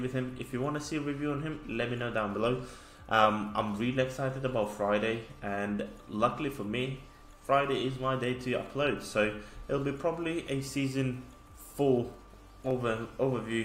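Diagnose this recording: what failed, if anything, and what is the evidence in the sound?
Two sharp, isolated clicks sit at 2.02 s and 12.71 s, each a thin vertical line across the spectrum with nothing audibly missing around it. This points to dropped samples, likely at the driver or buffer stage: a fraction of a millisecond vanishes, and the waveform jumps abruptly to a later value.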